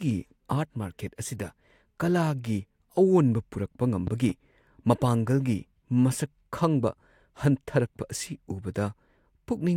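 At 4.07 s a loud pop breaks in as two sharp thumps, ending by 4.32 s and peaking about 5 dB above the speech. A sudden voltage pulse, likely from a plug or switch, caused it. The waveform shows two tall spikes and the spectrogram two thin broadband vertical lines, with speech continuing underneath.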